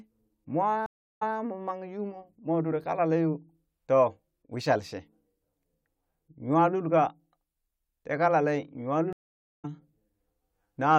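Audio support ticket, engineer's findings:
Stream reconnect, 0.86–1.36 s: about 0.35 s dropout, then playback resumes roughly 0.15 s earlier, repeating sound before "mo mang". Connection dropped; player reconnected, fresh decoder, server resent buffered burst.

Stream reconnect, 9.13–9.65 s, after "tee kalalee": about 0.5 s silence, resumes roughly 0.3 s further on, skipping material. Same network/player reconnect path, live-edge rejoin.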